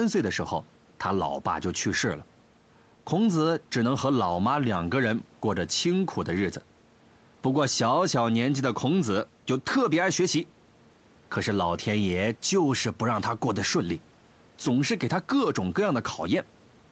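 No technical faults can be heard in this speech, which is band-limited to nothing above 8 kHz, as expected from a call's microphone processing and codec, and sits well above a faint room background about 32 dB lower.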